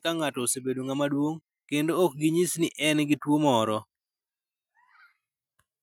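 From 0.05 to 3.26 s the speech and background noise swell together by about 6 dB: automatic gain rising, as the gain control judged the input too quiet and slowly raised it.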